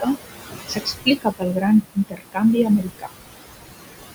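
Noise suppressor artifacts run through the whole clip: the suppressor pulls the steady room noise, sitting about 10 dB below the speech, down by about 19 dB frame by frame, so the background sinks in pauses and swells under speech.

Speech cut by the noise suppressor occurs from 0.68 to 1.64 s, 1.82 to 2.42 s and 2.66 to 3.1 s. The suppressor misreads quieter speech as noise and drops it by about 17, 21 and 19 dB, so roughly 0.4, 0.3 and 0.3 s of the three spans sound swallowed or faint.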